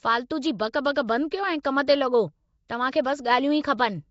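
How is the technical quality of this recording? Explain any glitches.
The recording is clearly degraded by low-rate codec damage throughout, with two brief pre-echo smears on top.

Nellymoser compression: the whole speech track has a rough, hissy halo and a smeared, underwater quality, and nothing is present above about 7.6 kHz. This is likely Nellymoser Asao, Flash's microphone codec, at a rate consistent with around 32 kbps. It codes short blocks with a fixed, small bit budget, so weak bands get no bits and are filled with noise, which produces that grainy, watery texture.

Pre-echo: at 1.63 s and 2.68 s, a short hiss briefly precedes a sharp onset, spreading about 17 ms and 13 ms ahead of it respectively. In a transform codec the quantisation noise is spread across a whole block, so when an attack lands late in a block, noise sized for the loud part also fills the quiet moment before it. 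As a result, these onsets sound softened and smeared.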